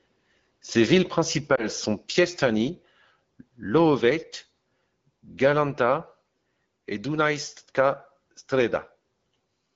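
A lost AMR speech frame hits this speech clip at 1.55 to 1.66 s, heard as a brief dip or warble rather than a full dropout, which fits a single 20 ms frame going missing. Radio errors left that frame failing its checksum, so the decoder filled the gap by repeating the previous good pitch and vocal tract settings at reduced gain, and the speech recovers weak or rough for a moment afterwards. Around it, the AMR wideband (HD Voice) codec at 12.65 kbit/s leaves only light coding damage.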